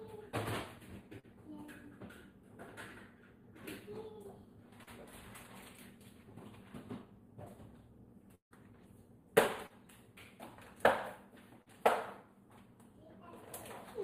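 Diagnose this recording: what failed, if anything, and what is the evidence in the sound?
In the channel path, one channel runs about a tenth of a millisecond late before mono summing. This channel delay (comb filtering) notches out evenly spaced frequencies from around 5 kHz, giving the whole clip a hollow, phasey sound.

On the network, short concealed packet loss drops about 40 ms of audio at 1.19, 4.83, 9.67 and 11.62 s. The decoder extends the preceding sound to fill each gap, leaving brief smears.

At 8.35 to 8.54 s, about 160 ms never arrives, likely a long network dropout. The concealment buzz or hiss fades and about 110 ms of silence follows before the sound resumes.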